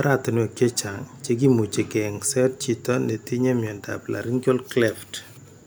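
No technical faults can be heard anywhere in the recording.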